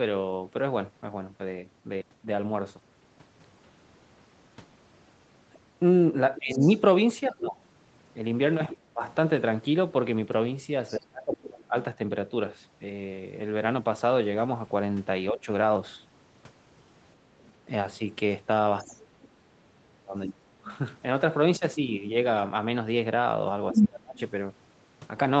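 A call recording of speech in which a second voice surfaces from 6.36 to 10.97 s at about 15 dB below the talker, faintly from 17.42 to 18.87 s at about 30 dB down, and from 23.72 to 24.19 s at about 5 dB above the talker. This is the other side's voice leaking through, likely loudspeaker echo that the canceller failed to remove. The talker's own speech dips from 6.39 to 11.75 s, from 18.87 to 20.69 s and from 23.73 to 24.20 s, falling by as much as roughly 30 dB, with a brief, milder dip around 15.31 to 15.48 s. This is speech suppressed in double talk, likely the echo canceller turning everything down while both sides spoke.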